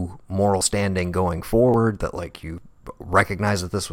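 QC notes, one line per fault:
0.61 s, 1.74 s and 2.58 s: dropped buffer (overrun). The speech jumps forward abruptly at each point. No gap of silence is heard. A piece of audio is simply missing, roughly 30 ms at 0.61 s and 2.58 s and about 10 ms at 1.74 s. The likely cause is the capture software falling behind, so the hardware overwrote samples before they were read.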